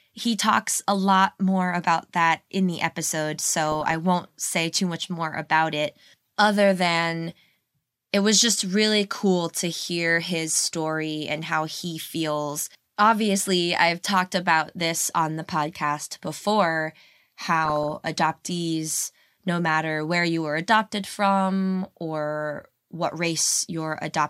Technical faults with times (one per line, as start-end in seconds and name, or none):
3.72-3.94 DAB burbling
9.84-9.94 DAB burbling
17.65-17.90 DAB burbling
22.56-22.64 DAB burbling